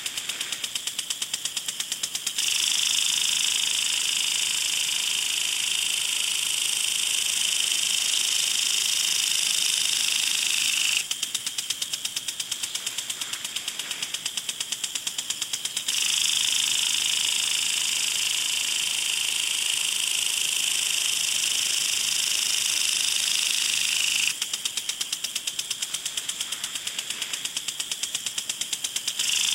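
No technical faults are audible anywhere in this recording of sounds.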